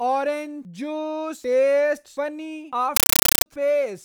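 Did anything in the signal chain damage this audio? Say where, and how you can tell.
Yes. At the playback stage, from 2.96 to 3.46 s, a compressed stream was played as audio. A bitstream on the digital link went undecoded, so loud chattering static replaces the speech. Its 8 ms noise bursts repeat at 31.25 Hz, which fits an AC-3 frame rate.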